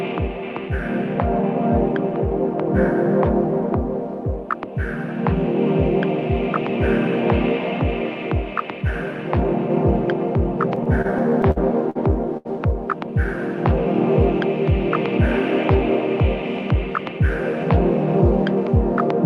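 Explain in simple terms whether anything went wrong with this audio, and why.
Yes, two things went wrong, both from parts of the audio arriving late over a call connection.

From 10.75 to 11.97 s there are repeated stalls, a stutter. The audio kept arriving late. Eight times the player ran out and held the last sound, about 0.18 s in total, the longest hold 52 ms. Nothing is lost, but it drags.

At 12.37 s there is a short stall from a late packet. One piece of audio was late. The player stretched the last sound for 78 ms until it arrived, then carried on from the same point. Nothing is missing, but that moment is held too long.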